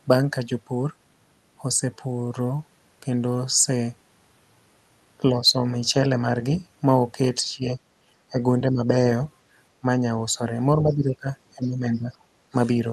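An echo canceller that likely could not tell the talker apart from loudspeaker echo while both sides spoke turned the speech down in bursts: speech suppressed in double talk at 5.35–5.63, 7.54–7.79, 8.31–8.40, 8.63–8.83, 10.83–11.27 and 11.56–12.13 s. Each dip pulls the speech down by roughly 5 to 10 dB for a fraction of a second. Within the last dip, at 11.63–11.67 s, likely residual echo from the loudspeaker lets the other side's voice leak through as a brief, faint scrap about 30 dB below the talker, heard over audio already band-limited to 12 kHz by the Opus call path.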